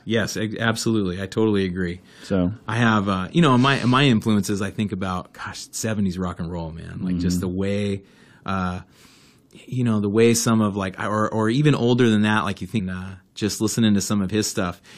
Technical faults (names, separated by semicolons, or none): stream segment skipped